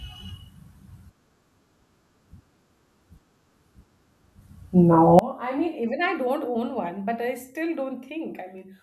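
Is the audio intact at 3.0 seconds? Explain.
Yes, the speech plays through 3.0 seconds without any dropout, click, distortion or other fault.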